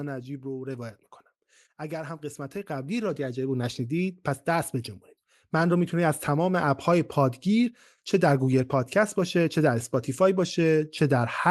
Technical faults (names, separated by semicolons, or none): automatic gain falling; automatic gain rising